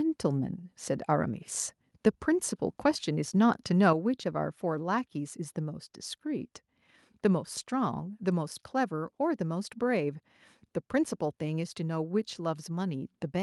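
A microphone volume stepped down at 3.93 s in this speech recording: voice and background both drop abruptly by about 5 dB in a single step. The likely cause is the call software judging the input too hot and cutting the device's capture volume at once.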